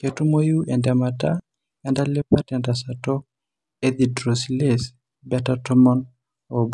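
No technical faults can be heard anywhere in the speech recording. There is no moment in the audio that calls for a time or a description of a problem.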